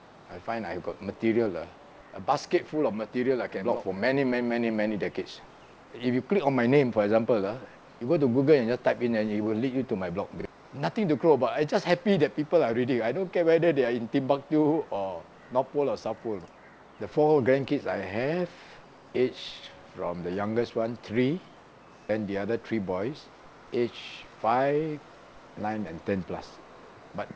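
Nothing stood out on listening; the sound carries no content above 8 kHz, which fits a wideband call path using G.722 at 64 kbps.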